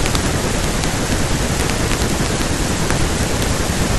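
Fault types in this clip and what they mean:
integer overflow: at 2.91 s a speech peak pushed about 2 dB past the integer limit wrapped to the opposite extreme, giving one sharp crack.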